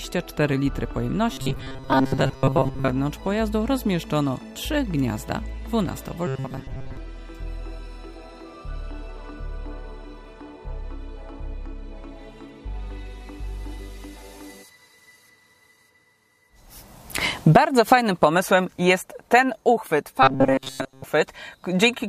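A rigid, metallic buzz at 133 Hz is heard from 1.33 to 2.90 s, 6.27 to 6.97 s and 20.23 to 21.04 s: robotic sound, likely from repeated short buffers of about 7.5 ms covering most of each stretch.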